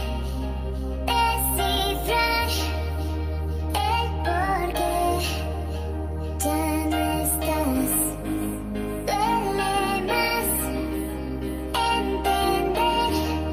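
No technical faults can be heard anywhere in this recording, and the signal holds steady throughout with nothing breaking its continuity.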